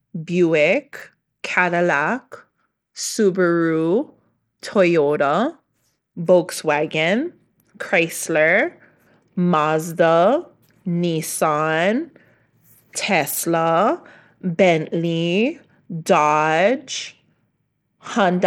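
From the first second to the last, the speech has a gritty, grainy edge and a treble that keeps flickering in and out. That's likely Bluetooth SBC compression starving the top sub-bands of bits and quantising the rest coarsely, which fits a low bitrate of around 96 kbps.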